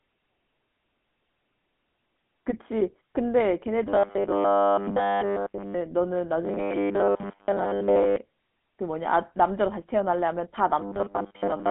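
The speech has passed through the GSM full-rate codec, which suits a 13 kbps phone link. That codec rebuilds the voice from a vocal-tract model excited by sparse, evenly spaced pulses. The line is confined to roughly 200 Hz to 3.5 kHz, with nothing above 3.8 kHz, so the whole clip sounds thin and muffled. The codec damage is plainly audible as a buzzy, gravelly roughness. In three stretches, from 3.88 to 5.74 s, from 6.45 to 8.16 s, and from 10.81 s to the end at 11.70 s, the sound turns into robotic sound from repeated short buffers. The likely cause is fresh audio arriving too late, so the playback loops its last fragment while real audio is dropped. The loop rate imposes a steady 100 Hz buzz, which fits a 10 ms buffer. In the first stretch essentially all the audio is replaced, and in the later two most of it is, leaving a rigid metallic drone that only loosely tracks the speech.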